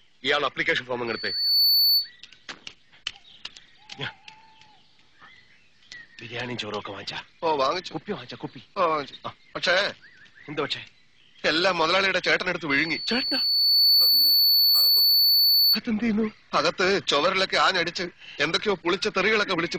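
Loudspeaker feedback squeal at 1.07–2.10 s and 12.70–15.81 s: a microphone-speaker loop exceeds unity gain at 4.5 kHz, and the tone swells over under a second, then about a second and a half, to a few dB above the audio, appearing as a brightening horizontal spectrogram line.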